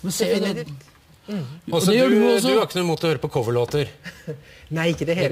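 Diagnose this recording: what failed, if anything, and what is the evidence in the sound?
A crude rate conversion failed at the sample-rate conversion stage. The sound was raised to a higher rate by repeating the nearest existing sample rather than filtering and interpolating, which fits a 44.1 kHz to 48 kHz conversion. Because the repeats fall in a fixed pattern set by the two rates, they create inharmonic tones around 25 dB below the signal. The result is a gritty fizz throughout, strongest on loud and high-pitched material.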